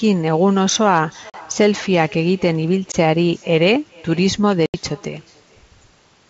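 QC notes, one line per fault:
throughout: echo with no canceller. There's a faint, thin copy of the speech trailing it by roughly 0.4 s, about 26 dB down. The far end's loudspeaker is leaking into its mic and nothing is cancelling it, so the voice comes back after the network round trip.
1.30–1.35 s, 2.92–2.96 s, 4.66–4.75 s: packet loss on an ADPCM call. Hard-edged silent gaps of 40, 20 and 80 ms, which fits losing one to a few packets each time. Afterwards the decoder's predictor and step size are out of step with the sender's, so the speech comes back slightly distorted before settling.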